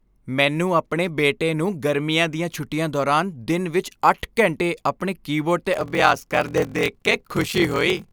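Speech, with a block size mismatch (padded) from 5.72 s to the end, just after "ਘੰਟੇ ਆਪਣੇ ਕੀਬੋਰਡ 'ਤੇ": zero-filled gaps cause a 43.1 Hz buzz, consistent with 1024-sample read blocks, and playback slows to 0.861× at near-normal pitch.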